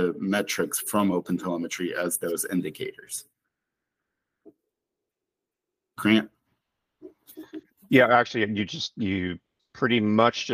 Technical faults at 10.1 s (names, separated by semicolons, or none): none